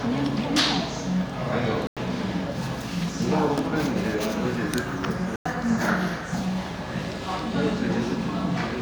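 At 1.87 s and again at 5.36 s the sound mutes for about 0.1 s, a digital broadcast dropout. The receiver silenced bad frames, consistent with roughly three frames lost. Unlike a pause, the programme resumes further on, its missing portion gone.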